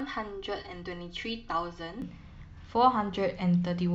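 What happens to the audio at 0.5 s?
At 0.5 s the speech is inside a stretch of channel delay comb filtering running from 0.0 to 2.02 s. One channel lags the other by roughly 3 ms before the mono sum, cancelling evenly spaced frequencies from around 200 Hz upward, so the sound turns hollow and phasey.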